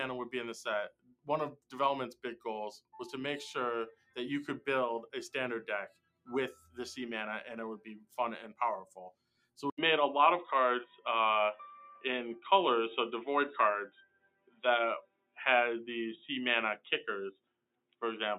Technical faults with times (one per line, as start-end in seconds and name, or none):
0.00-18.38 noise suppressor applied to music or sounds
0.90-2.94 sound cut by the noise suppressor
3.93-4.17 sound cut by the noise suppressor
5.89-6.78 sound cut by the noise suppressor
7.78-8.14 sound cut by the noise suppressor
8.88-9.58 sound cut by the noise suppressor
9.70-18.38 input switched to a poorer device
10.90-11.05 sound cut by the noise suppressor
13.89-15.38 sound cut by the noise suppressor
16.78-18.02 sound cut by the noise suppressor